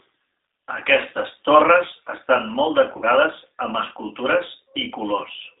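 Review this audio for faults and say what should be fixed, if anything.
Throughout the clip the speech sounds thin, slightly rough and synthetic. Nothing reaches below about 300 Hz or above 3.7 kHz, and the texture is plainly audible. These are the marks of the G.729 codec, which fits the G.729A variant at 8 kbit/s. It does not carry the waveform itself. It rebuilds each 10 ms frame from a vocal tract filter, a pitch predictor and a few coded pulses, so fine detail and high frequencies are lost. To prevent this, send the call with a wideband codec such as G.722 or Opus.

Just after "torres estan molt", from 2.97 to 3.05 s, the sound smears into a brief stretched sound that fades instead of continuing cleanly. This is VoIP packet loss concealed by the speech codec. About 50 ms of audio went missing, which fits five lost frames. The decoder filled the gap by repeating its last pitch and filter settings with the gain falling frame by frame. 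To prevent this, improve the network path or add jitter buffering and forward error correction.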